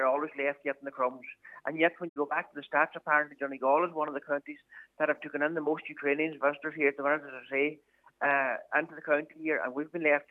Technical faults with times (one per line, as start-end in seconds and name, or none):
2.07-2.18 digital broadcast dropout